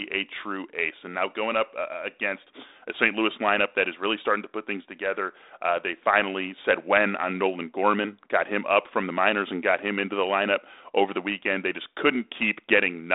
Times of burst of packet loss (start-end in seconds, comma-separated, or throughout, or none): none